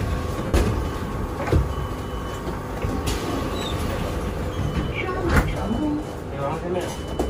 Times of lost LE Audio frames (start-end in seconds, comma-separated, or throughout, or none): 0.46-0.54, 4.83-4.91, 6.90-6.95